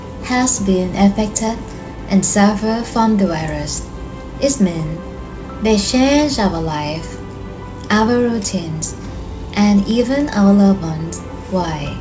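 No technical faults can be heard in this audio.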